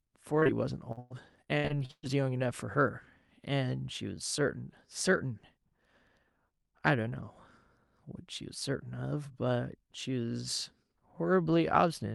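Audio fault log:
0.39–0.50 s, short concealed packet loss: three packets in a row, each carrying about 20 ms of audio, missed the decoder's deadline. The receiver stretched the preceding sound to fill each hole, so this brief stretch smears and wobbles before real audio returns.
0.92–2.07 s, repeated packet loss (robotic sound): packets dropped nine times in just over a second, about 440 ms missing in all, the longest gap 116 ms. Each hole is patched by continuing the last sound, leaving over a third synthesized, choppy, with pieces missing.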